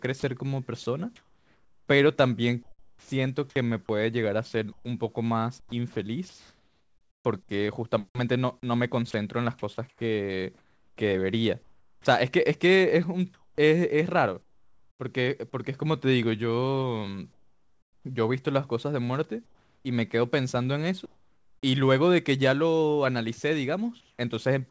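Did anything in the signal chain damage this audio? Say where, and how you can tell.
Yes. In call processing, the sound is chopped by the voice detector at 0.2–3.1 s, 4.7–7.2 s and 9.1–15.0 s, with stretches swapped for synthetic fill, likely from discontinuous transmission.

Comfort noise replaces the background at 17.3–18.0 s, 19.5–21.7 s and 24.0–24.2 s. Featureless noise substitutes the real background, about 14 dB quieter at first, likely generated receiver-side.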